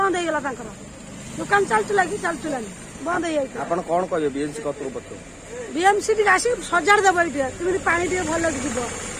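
Nothing in this audio stands out as a technical fault, so there's nothing to point to along the way.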